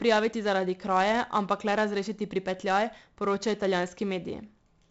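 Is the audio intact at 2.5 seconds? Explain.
No. At 2.5 seconds, as throughout the speech, a gritty hiss rides on every loud syllable, sharp onsets distort, and nothing sounds above 7.8 kHz. This is heavy 4-bit ADPCM compression, consistent with roughly 64 kbps: each sample is coded as a coarse step from a prediction.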